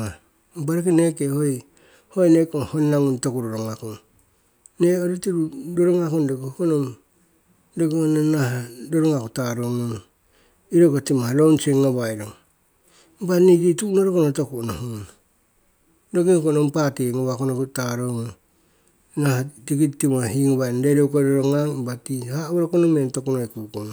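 No technical faults can be heard anywhere in the speech. The recording stays steady throughout, with nothing audible that points to a fault in the chain.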